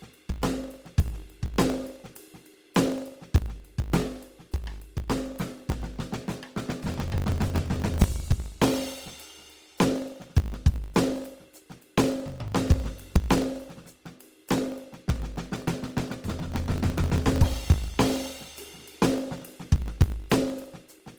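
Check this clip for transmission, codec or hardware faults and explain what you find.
Two faults run through the whole music clip. One is a block size mismatch with truncation. The other is coding damage, most likely from Opus compression.

The block size mismatch lasts from start to finish. One stage writes longer blocks than the next stage reads. The tail of each block is discarded, so a small slice of music goes missing every time. The cuts repeat at 50 Hz, and that regular seam is heard as a steady buzz under the music. The missing slices also shorten the material, so the music plays 1.16 times faster while its pitch stays about normal. The pattern fits blocks of 1024 samples being written and cut short.

The coding damage is also present throughout, and it is plainly audible. Tones sound grainy, rough and noisy rather than clean. There are few obvious spectral holes and little swirling. 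Instead, bands that lack bits seem to be filled with noise or copied from lower bands. The top end extends to about 20.2 kHz, so the full bandwidth is kept. Both the texture and the wide bandwidth point to Opus in its music (CELT) mode, likely at a low rate around 24 kbps.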